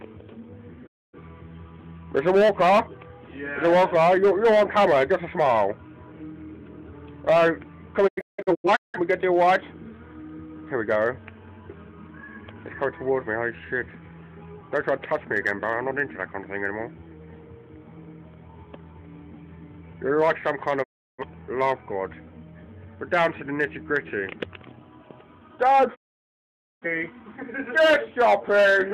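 At 0.86 s the audio fades out over about 20 ms and stays silent for about a quarter second before returning at 1.19 s. This is a digital broadcast dropout: the receiver muted while incoming frames were missing or corrupt. From 8.07 to 8.99 s the sound breaks into several short holes, the longest 0.17 s. Further mutes follow at 20.82 to 21.24 s and 25.94 to 26.87 s, the last a solid 0.85 s gap. Whatever was transmitted during each gap is lost.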